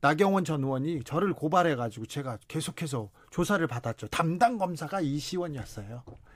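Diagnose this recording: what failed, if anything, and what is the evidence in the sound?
Nothing in the recording stood out as a fault on listening.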